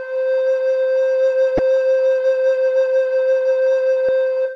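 A short glitch cuts through the music at 1.56 to 1.59 s, and a matching one returns at 4.06 to 4.09 s, each lasting about 30 ms. Both come from damaged data in a compressed stream: bytes in the encoded file were lost or corrupted at those points, so the decoder misread the affected frames and lost its place. For that instant, the music glitches until the decoder finds the next valid frame header and resumes.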